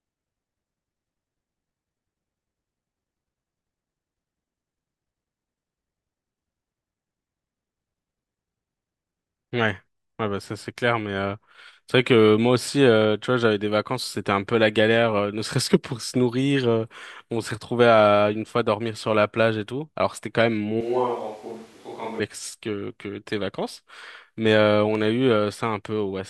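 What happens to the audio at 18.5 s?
Nothing goes wrong at 18.5 s: the speech carries on intact through that moment, with no dropout, click, distortion or other audible fault.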